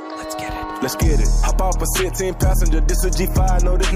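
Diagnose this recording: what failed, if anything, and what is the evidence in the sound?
Nothing failed; no fault can be heard here.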